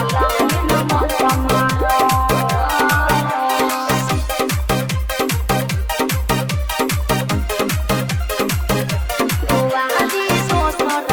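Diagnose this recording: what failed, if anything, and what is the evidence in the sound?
Nothing failed: no stage of the chain, from capture through to playback, leaves any audible mark on this recording. There is no evidence in the sound pointing to a problem anywhere along the signal path.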